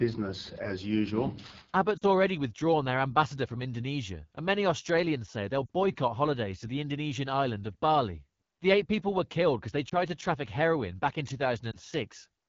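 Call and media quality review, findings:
Rough, raspy speech throughout. AMR wideband (HD Voice) codec at a low mode, consistent with about 8.85 kbit/s. The pulse-driven vocal tract model is starved of bits, and the 6.4 to 7 kHz band is filled with noise.

Brief dips and warbles at 1.98–2.05 s, 5.66–5.70 s, 9.89–9.94 s and 11.72–11.76 s, about 40, 40, 20 and 20 ms long. Lost AMR speech frames over the radio link. The decoder repeats the last pitch and vocal tract settings at falling gain, and speech returns briefly weak.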